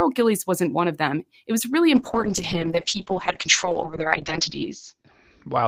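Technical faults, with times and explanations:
1.96–5.68 s, call bitrate drop: after "was really" starved coding turns the sound rough and muffled, bandwidth falling from 20 kHz to 8 kHz, fitting roughly 7 kbps.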